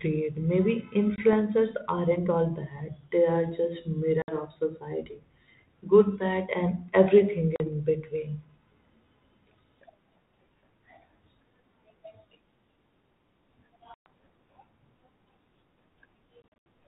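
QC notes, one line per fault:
1.16–1.33, 4.22–4.32, 7.56–7.67, 13.94–14.06 and 16.42–16.65 s, packet loss on an ADPCM call: hard-edged dropouts of 20 to 160 ms (the last broken into several gaps), then speech resumes slightly distorted while the decoder's adaptive predictor and step size resync.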